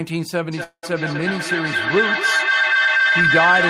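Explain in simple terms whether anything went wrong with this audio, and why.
Yes, two things went wrong. From 0.52 s to the end, there is a feedback howl. The sound loops from loudspeaker back into microphone, getting louder each trip. It narrows to a whistle near 1.5 kHz.

At 0.63 s there is a call audio freeze lasting about 0.2 s. The sound is stretched into a fading buzz or hiss, then briefly goes silent before resuming at 0.85 s. Nothing is lost, only delayed. The likely cause is sound data arriving late.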